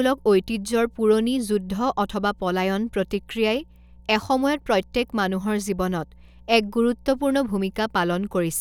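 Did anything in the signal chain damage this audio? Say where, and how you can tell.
Yes. Mains hum, a steady 60 Hz tone with low harmonics, runs from start to end about 30 dB below the speech. It enters in the analogue wiring through a ground loop or nearby transformer. Unlike rumble, its pitch is fixed and unaffected by the speech.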